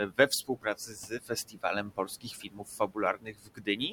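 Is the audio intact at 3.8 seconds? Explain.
No. From 3.15 s to the end, the speech sounds swallowed and faint, dipping by about 18 dB over roughly half a second: speech cut by the noise suppressor, which mistook it for background noise. Underneath are noise suppressor artifacts from frame-by-frame band gating that lowers the steady noise by about 17 dB.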